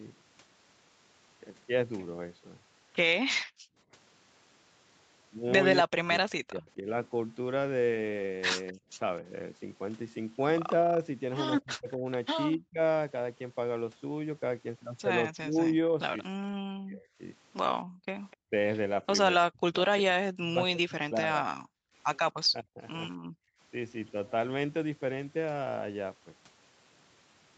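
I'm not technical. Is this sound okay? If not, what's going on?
No, there are a few problems, all from the echo-cancelling part of a speakerphone call.

Background gated by the echo canceller: at 3.43 to 3.77 s, 17.85 to 18.06 s and 21.6 to 23.6 s, the room sound underneath the speech suddenly drops away almost to silence, then comes back. The echo canceller heard the loudspeaker playing and turned the microphone down hard to keep that playback out. In the last stretch the gaps add up to well under a second.

Speech suppressed in double talk: between 5.86 and 22.8 s, the talker's voice repeatedly sinks, goes dull or breaks into pieces, about four seconds of damage in total. This is likely because both sides were talking at once. The canceller couldn't tell the local talker apart from the echo of the other side, so it turned everything down together, and the speech lost out.

Echo leak: at 8.67 to 8.72 s and 18.31 to 18.37 s there are brief, faint scraps of a delayed copy of the voice, arriving about a quarter of a second late. 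This is likely leftover echo. A loudspeaker on one end was picked up by its own microphone, and the canceller didn't remove all of it before sending it back.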